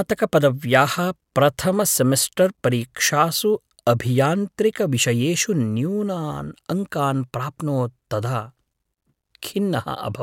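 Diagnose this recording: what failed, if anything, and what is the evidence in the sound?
Nothing failed: no stage from capture to playback leaves an audible defect anywhere in the speech.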